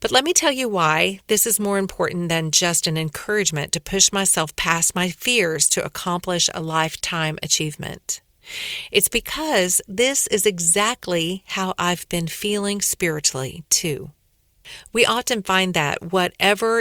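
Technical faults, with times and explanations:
No technical faults can be heard anywhere in the speech.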